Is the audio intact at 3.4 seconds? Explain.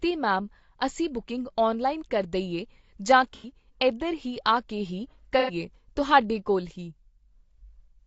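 No. AAC frame loss with concealment hits from 3.35 to 3.50 s, between "ਔਨਲਾਈਨ ਕਰ ਦਈਏ ਜਾਂ" and "ਇਧਰ ਹੀ ਆ ਕੇ". About 90 ms of data is missing, which fits roughly three lost frames. The decoder rebuilds that gap from the last good spectrum, so the speech there turns smeared and noisy rather than falling silent.

The same spot also carries the rough, grainy texture heard across the whole clip, likely from low-delay AAC compression (AAC-ELD) at about 32 kbps. Its short frames blur the pitch harmonics and leave noise between them.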